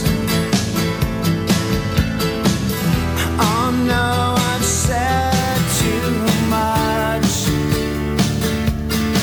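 From 5.39 s to the end, a gritty, inharmonic fizz rides on the louder and brighter sound, roughly 20 dB below it. This is crude rate conversion: samples were simply repeated without filtering, which fits a jump from 32 kHz to 44.1 kHz.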